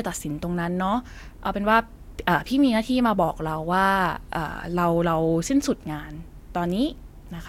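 Nothing stood out on listening to the speech.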